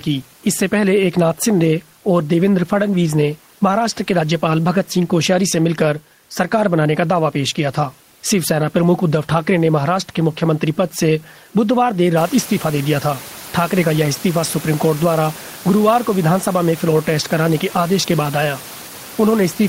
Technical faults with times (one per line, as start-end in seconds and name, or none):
none